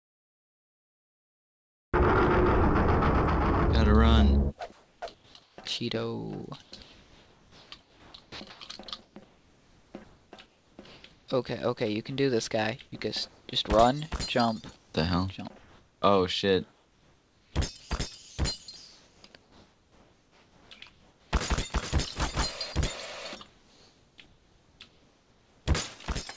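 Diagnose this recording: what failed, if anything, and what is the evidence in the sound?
Cut-off start, at the storage or capture stage: the file holds digital silence until 1.94 s, then jumps into a sound already underway. The waveform shows a flat line followed by an abrupt edge.

Comfort noise in place of the background, from call processing: at 4.72–5.58 s, 13.28–13.48 s (about 2 dB quieter) and 23.48–25.66 s, real ambience becomes smooth, featureless hiss. This is likely discontinuous transmission. The spectrogram shows a uniform, textureless band.

Onset clipped by the voice detector, in call processing: at 5.00–5.02 s the sound starts hard, with no soft attack. The detector likely reacted late. The waveform shows a sudden vertical onset out of noise.

Sound chopped by the voice detector, in call processing: across 6.62–11.28 s and 14.76–21.32 s, the sound has repeated holes filled with comfort noise. 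This is likely repeated gating. On the spectrogram, detailed texture alternates with flat noise blocks, all capped at 8 kHz, which fits the G.722 call path.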